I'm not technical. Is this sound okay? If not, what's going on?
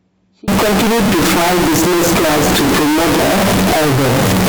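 No. From about 0.48 s to the end, the speech turns into a loud, harsh buzz, likely a float read as integer mix-up between two audio formats.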